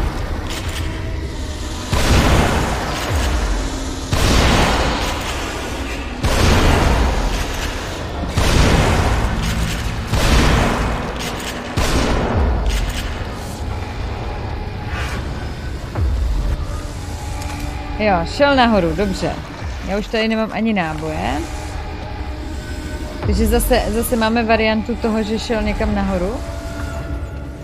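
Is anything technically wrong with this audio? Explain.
Yes. A drift correction step occurs at 0.49–1.34 s and again at 5.33–7.81 s. Clock-matching software likely changed the playback rate abruptly, first speeding up 5.9% (about 99 cents sharp), then slowing 5.9% (about 105 cents flat). Each time, speed and pitch shift together by roughly a semitone, then snap back.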